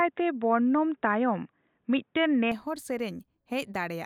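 From 0 to 2.52 s the speech is narrowband, with nothing above 3.8 kHz, then clears with no gap. That points to an input switched to a poorer device, likely, rather than a filter, because the level also shifts by a few decibels and a faint separate noise floor comes and goes with it.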